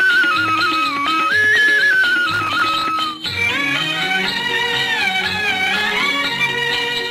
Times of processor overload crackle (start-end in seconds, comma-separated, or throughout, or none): 2.32-2.85, 5.64-6.00